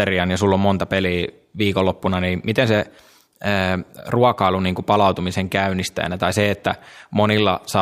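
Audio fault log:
No faults heard anywhere in this speech recording.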